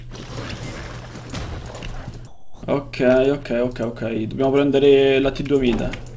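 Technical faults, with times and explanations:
2.27 to 2.63 s, comfort noise in place of the background: for 360 ms the real background, which sits about 22 dB below the loudest parts, is swapped for a smoother synthetic noise about 11 dB quieter. The likely cause is that the sender stopped transmitting during the pause and the receiver filled it with generated noise. On a spectrogram the gap shows as an even, texture-free wash, cut off at 8 kHz like the rest of the clip. On the waveform the envelope drops to a flat band.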